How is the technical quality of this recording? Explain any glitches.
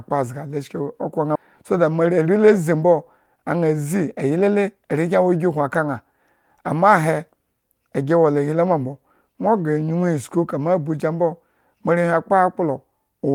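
The recording has two timing glitches: one sudden jump forward and one short stretch of hurried speech.

At 1.35 to 1.37 s the speech lurches ahead with no pause, as if a piece had been snipped out. This is a skip ahead. With later audio already queued, roughly 700 ms of speech was dropped, either in transit or by the jitter buffer when it overflowed, and the two sides were spliced together with nothing filled in. About seven tenths of a second of talk is simply gone.

From 3.26 to 4.84 s the speech runs noticeably faster, about 110% of normal rate, yet the pitch stays unchanged, giving a rushed, clipped feel. This is a jitter buffer speed-up. Too much audio had piled up in the buffer, so the receiver repeatedly cut out tiny slices one or a few pitch periods long to shrink the backlog. Together these cuts remove around 150 ms across the stretch, which brings the delay back down.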